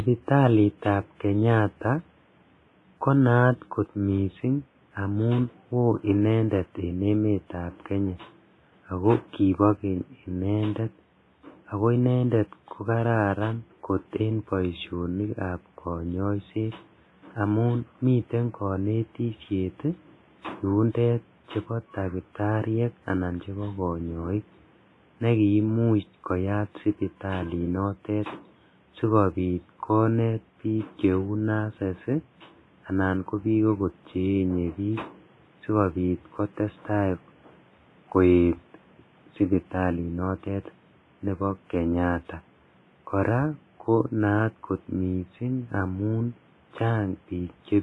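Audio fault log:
throughout: WMA compression. The speech was likely encoded with Windows Media Audio at a low bitrate, and the damage fits roughly 24 kbps. This transform codec quantises coarsely, so its error spreads in time around each sound and weak spectral detail is dropped entirely. The codec damage is heavy: a ringing, washy quality clings to syllables, and a hiss breathes with the speech, while room noise sits about 36 dB below the speech.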